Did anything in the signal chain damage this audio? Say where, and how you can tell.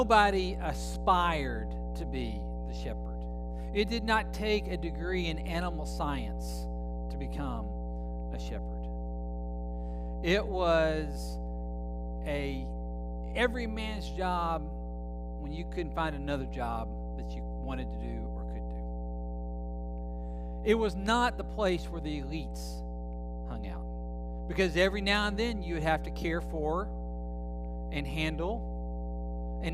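Yes: mains hum at 60 Hz runs throughout this speech, nearly as loud as the speech itself, from a ground loop or a nearby transformer coupling into the analogue wiring. A spectrogram shows a steady horizontal line at 60 Hz.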